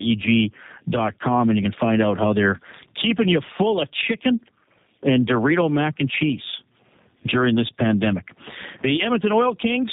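Tandem speech coding runs through the whole recording: the speech has been squeezed through a low-rate coder, decoded, and then coded again, so the second pass works on the first pass's errors. The result is rough, warbly and muffled, with nothing above 3.8 kHz. The character fits two passes through a G.729A-style 8 kbit/s coder with a G.711 mu-law link between them, the middle hop adding little damage of its own.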